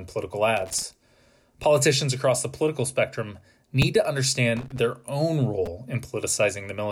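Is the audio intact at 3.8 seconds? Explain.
No, not quite. At 3.82 s there's a repeated buffer. New audio didn't arrive in time, so the device replayed the last chunk once more. The repeated piece is only about 5 ms long, which points to a very small buffer, so you won't hear a stutter. It comes across as a quick click or brief buzz with a hard join on each side, and roughly 5 ms of speech is lost.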